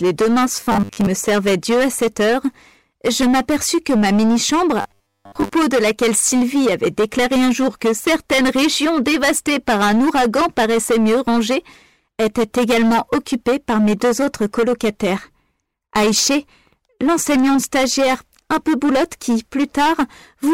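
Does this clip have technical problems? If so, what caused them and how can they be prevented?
Yes. Hard clipping runs through the whole clip. The signal is driven about 15 dB past what the chain can pass, so around a fifth of the samples have their peaks cut flat, adding a harsh fuzz on every loud passage. Prevent it by lowering input gain or adding headroom before conversion.

Robotic sound from repeated short buffers occurs from 0.57 to 1.07 s and from 4.81 to 5.53 s. A rigid 100 Hz buzz replaces the natural texture, which fits a 10 ms segment being replayed. The likely cause is late-arriving audio, with roughly half, then most, of the material skipped. Prevent it with larger buffers or a less loaded audio thread.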